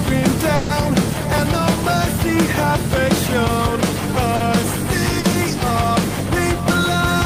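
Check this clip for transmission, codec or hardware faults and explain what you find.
Three network faults show up, one longer dropout near the start and two brief concealed gaps later on.

A burst of packet loss runs from 0.55 to 0.71 s. About 140 ms of audio failed to arrive in time, so the receiver stretched the last sound it had, fading it as the gap lengthened. It is heard as a held, dimming tail before the sound jumps ahead past the missing section.

Short concealed packet loss occurs at 4.36 to 4.42 s and again at 5.20 to 5.26 s. Each time, 40 ms never reached the decoder, and the receiver synthesised a continuation of the preceding sound before blending back into the real audio. These are heard as quick smears or wobbles.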